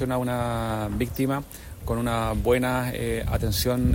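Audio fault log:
throughout switching supply whistle: a faint high whistle wandering between 12.3 and 12.7 kHz, roughly 40 dB below the signal, from a power supply switching in its audible range.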